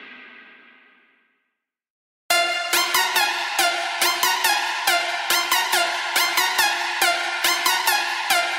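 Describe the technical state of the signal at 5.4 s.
At 5.4 s the signal is intact, with no audible fault at that moment.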